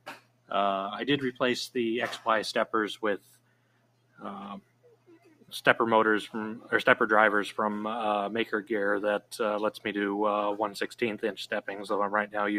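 A noise suppressor applied to music or sounds runs throughout: a speech-tuned suppressor treats sustained tones, ambience and tails as noise, so level swings by roughly 15 dB. The waveform's envelope pumps, and on a spectrogram held partials fade while onsets stay bright.

The sound is cut by the noise suppressor from 0.00 to 0.51 s, 3.18 to 4.23 s and 4.60 to 5.52 s, dropping by up to about 18 dB. These stretches sink and thin audibly. They show as narrowed waveform sections and darker, emptied spectrogram bands with clipped decays.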